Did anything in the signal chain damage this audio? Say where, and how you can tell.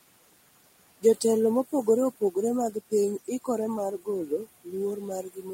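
Yes, the call-processing stage did it. Throughout the clip you can hear noise suppressor artifacts. The room noise sits about 18 dB below the speech, and the suppressor keeps pulling it down in the gaps and letting it back up under the talking. It comes from the suppressor deciding band by band and frame by frame what counts as steady noise.

The same processing also cuts into the speech itself in three stretches. From 1.68 to 2.36 s, roughly a sixth of a second of sound drops by up to about 16 dB. From 2.72 to 3.48 s, around a fifth of a second drops by up to about 19 dB. From 3.98 s to the end, the loss reaches about 20 dB. The quieter bits sound swallowed because the suppressor mistook them for background and ducked them along with it.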